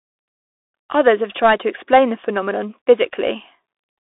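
Throughout, the speech sounds thin, scratchy and grainy, with nothing above 3.8 kHz: a Bluetooth CVSD headset codec, whose one-bit adaptive steps can't track fast, high detail.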